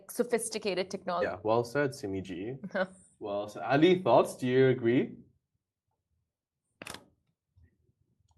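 At 1.21 to 1.23 s the speech jumps abruptly forward, with roughly 0.7 s of audio missing and the two sides spliced together with no gap. This skip ahead happened because a stretch of audio was discarded while later audio was already queued, so playback resumed further along.

From 1.37 to 2.41 s the speech sounds hurried, running about 9% fast while keeping its normal pitch. This jitter buffer speed-up comes from the buffer holding too much audio. To shrink the delay, it repeatedly trimmed short pitch-period slices, removing around a tenth of a second in total.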